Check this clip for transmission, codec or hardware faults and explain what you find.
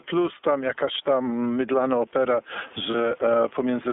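Three faults are audible: level pumping and narrowband codec coloration throughout, and one brief dropout near the end.

Gain pumping, throughout: the background swells in pauses and ducks by around 10 dB under each loud syllable. The likely cause is excessive input gain driving a fast limiter. Unlike noise suppression, the noise returns at full level rather than being gated.

iLBC codec, throughout: the band runs only from 250 Hz to 3.5 kHz, and the speech has a rough, slightly synthetic edge. This fits iLBC's 13.33 kbps mode with 30 ms frames. The texture is grainier than the plain dullness of band-limiting alone.

Lost iLBC frames, 2.91 to 2.95 s: a roughly 30 ms gap, consistent with one lost frame, is filled with a repeated pitch cycle mixed with noise. It sounds like a short buzzy held vowel. The voice recovers immediately, unlike codecs whose errors carry over into following frames.

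Room noise, about 42 dB below the speech, is part of the recording and is what makes the pumping audible.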